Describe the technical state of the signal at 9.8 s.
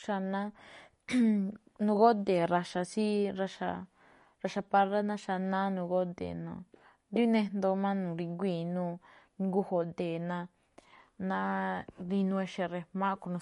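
At 9.8 s the speech is passing through the same damage that runs through the whole clip, likely MP3 compression at a bitrate around 48 kbps. Starved of bits, the encoder drops the treble entirely above 11.2 kHz and discards the weaker frequency lines, letting them flicker in and out between frames. The result is plainly audible: a dull top end, a watery, swirling texture, and metallic chirps on s sounds, with consonant onsets smeared.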